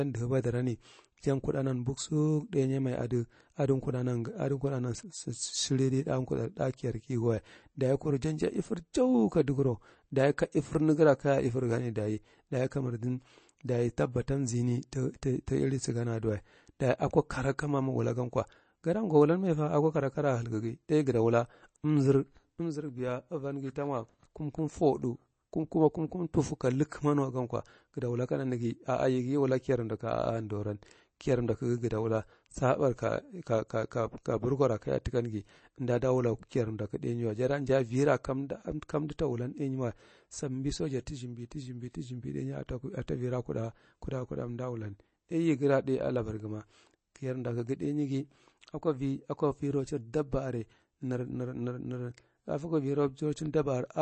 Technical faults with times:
0.00-54.02 MP3 compression

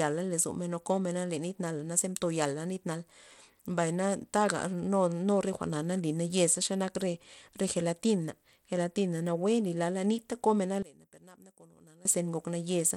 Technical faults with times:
0.00-12.97 Bluetooth SBC compression
10.82-12.05 one channel inverted

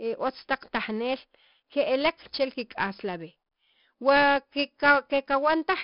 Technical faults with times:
0.00-5.83 4-bit ADPCM compression

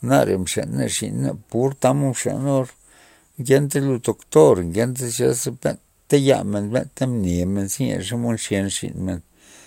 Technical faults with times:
none

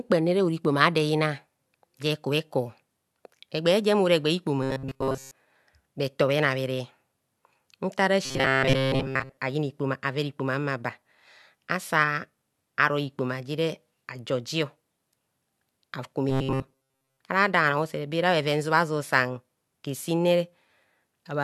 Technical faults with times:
4.63-5.32 robotic sound from repeated short buffers
8.25-9.37 robotic sound from repeated short buffers
16.29-17.20 robotic sound from repeated short buffers

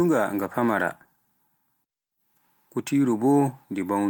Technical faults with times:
0.32-1.47 call bitrate drop

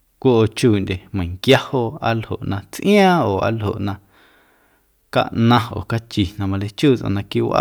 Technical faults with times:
1.50-1.55 hard clipping
5.18-5.58 hard clipping

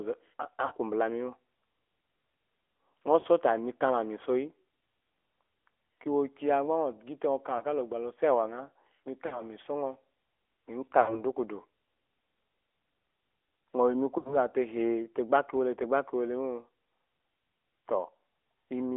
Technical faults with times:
0.00-18.96 AMR narrowband mobile codec
0.66-0.73 lost AMR speech frames
3.20-3.40 lost AMR speech frames
7.58-7.64 lost AMR speech frames
9.26-9.42 lost AMR speech frames
11.02-11.20 lost AMR speech frames
14.18-14.37 lost AMR speech frames

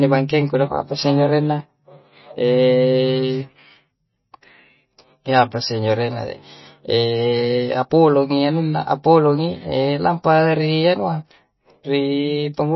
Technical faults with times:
0.00-12.76 MP3 compression

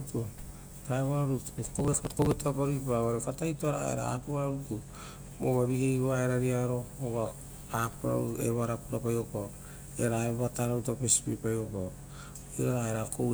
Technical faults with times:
1.75-2.33 processor overload crackle

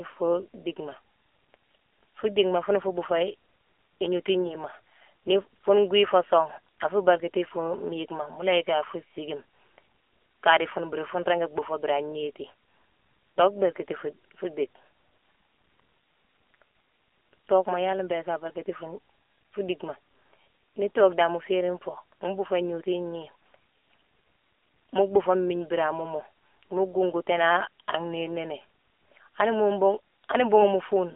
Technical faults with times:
0.00-31.16 AMR narrowband mobile codec

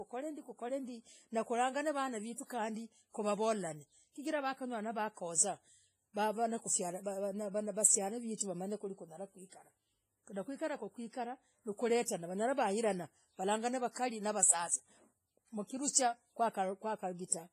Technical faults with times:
0.00-17.53 WMA compression
8.36-8.40 pre-echo

